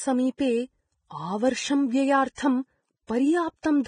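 The speech carries heavy codec damage all the way through, likely from Vorbis compression, with nothing above about 9.7 kHz and grainy, hissy treble pointing to a bitrate around 21 kbps.

Pre-echo turns up at 0.38 s, 1.1 s, 2.35 to 2.38 s and 3.07 to 3.09 s. Block-spread quantisation noise leaks hiss just ahead of sharp attacks, smearing them.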